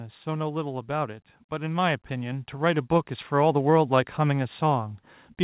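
From 0.05 to 0.72 s, automatic gain falling: the control judged the input too loud or too noisy and eased the level down about 3 dB, background sinking with speech, unlike a fade-out. From 0.86 to 3.64 s, automatic gain rising lifts everything about 8 dB over nearly three seconds, noise floor swelling too, not just speech getting louder. Throughout, nothing above 4 kHz, which fits a narrowband G.711 call path.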